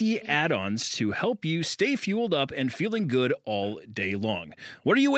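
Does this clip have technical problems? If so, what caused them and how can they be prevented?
Yes. From 0.21 to 0.35 s a faint delayed copy of the speech, about 0.26 s late and roughly 15 dB quieter, is heard, likely an echo leak from a far-end loudspeaker past its echo canceller. To prevent it, the far end should use headphones or a properly tuned echo canceller.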